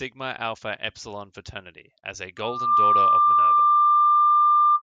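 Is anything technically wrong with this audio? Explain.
Yes. From 2.37 s to 4.82 s there is loudspeaker feedback squeal: the microphone re-captures its own loudspeaker, and at 1.2 kHz the loop gain exceeds one. The tone swells in under half a second to roughly 15 dB above the speech, appearing as a bright horizontal spectrogram line and a thickening waveform envelope.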